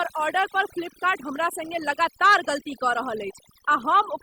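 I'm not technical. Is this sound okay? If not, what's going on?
No. The clip has overdone noise removal from start to end. A noise cleaner was pushed too hard. It switched off parts of the sound it mistook for hiss, taking quiet bits of speech too. The background in the gaps drops and breaks up into twinkling, warbling specks.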